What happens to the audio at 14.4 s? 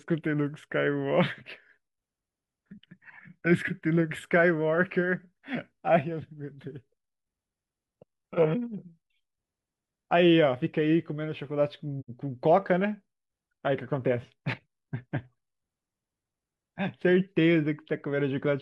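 Nothing goes wrong at 14.4 s: the speech carries on intact through that moment, with no dropout, click or distortion to be heard.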